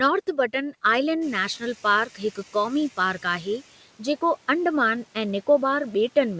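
A short speech recording carries two faults. Between 0.27 and 0.55 s, speech cut by the noise suppressor affects about a tenth of a second in total, with the deepest drop about 10 dB. The suppressor mistook quiet speech energy for noise, so parts sound swallowed. On a spectrogram these show as faint, gapped patches in the speech. Around 1 s the room noise jumps by about 16 dB, and the noise suppressor catching up is heard from 1.21 to 3.59 s. Its noise estimate lags the new level, so the noise first comes through with less reduction and then sinks by about 8 dB over 2.38 s. The waveform shows a raised noise floor between phrases that tapers down gradually. After the rise the noise sits about 24 dB below the speech. Throughout, the spectrogram shows nothing above 8 kHz, which fits a wideband call codec such as G.722.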